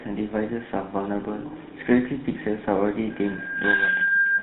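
Speech coded throughout with the GSM full-rate codec. The band stops at 4 kHz, and the voice has a buzzy, gravelly texture from the regularly pulsed excitation driving a vocal-tract model, which fits a 13 kbps full-rate stream. From 3.10 s to the end, a loudspeaker feedback squeal appears. A single 1.6 kHz tone swells over a little under a second until it sits around 10 dB above the speech. The microphone is picking up its own loudspeaker, and the loop gain exceeds unity at that frequency.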